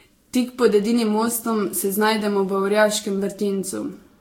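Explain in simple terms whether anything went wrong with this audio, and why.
Generation loss runs through the whole clip. The speech sounds swirly, hollow and smeared, and the starts of sounds are blurred. It was likely compressed and decompressed around seven times, and each pass added fresh damage that piled up on the last.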